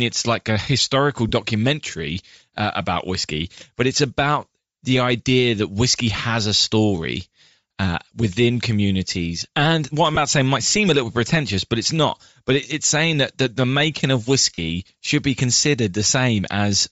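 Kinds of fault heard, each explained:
Bluetooth LC3 compression: The whole speech clip has a breathy, grainy edge. Its upper spectrum is thinned out and partly replaced by hiss-like fill. That points to a low-rate transform codec, likely LC3 from Bluetooth LE Audio, fitting about 32 kbps with 10 ms frames.
lost LE Audio frames: Three brief gaps occur, at 1.29 s, 10.15 s and 14.54 s. In each, the decoder repeats its last spectrum with scrambled signs, so the sound smears into noise. The first two last about 20 ms. The third lasts about 40 ms.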